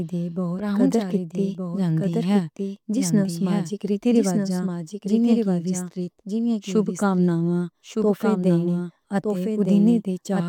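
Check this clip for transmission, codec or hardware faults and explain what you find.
One fault is present. Throughout, a doubled audio track: each phrase repeats about a second later, roughly 5 dB quieter and dry, likely from a second, slower capture path mixing in.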